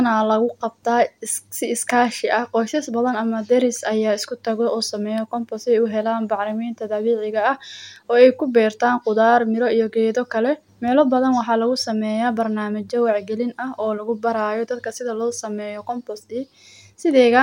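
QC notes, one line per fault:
Nothing stood out on listening to this speech recording.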